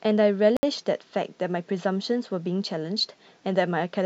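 A Bluetooth stall runs from 0.57 to 0.63 s: the speech drops out to complete silence for 64 ms and then resumes. The cause is likely radio interference holding up packets on the wireless link, so the headphones' small playback buffer emptied before retransmitted data arrived and output simply halted until it did. The result is a brief hole in the speech.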